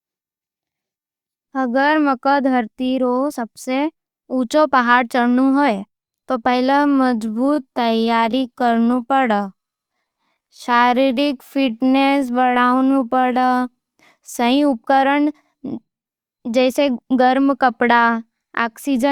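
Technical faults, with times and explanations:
6.66 to 13.64 s, time-stretched section: processing likely stretched this stretch of speech to about 0.73 times its original pace, repeating short pieces to keep the pitch unchanged, so the delivery abruptly slows and drags before normal pace returns.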